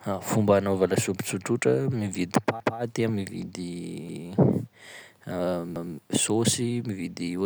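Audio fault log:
2.60–2.79 s, 4.09–4.27 s, 5.76–5.94 s: repeated buffer. Late audio made the device replay a 0.19 s piece once. Hard joins cause each stutter.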